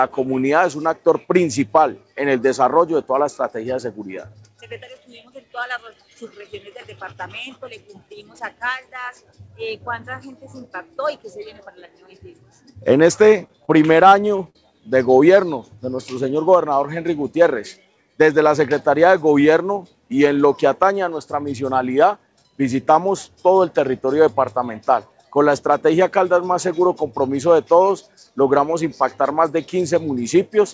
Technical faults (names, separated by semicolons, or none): repeated stalls (stutter)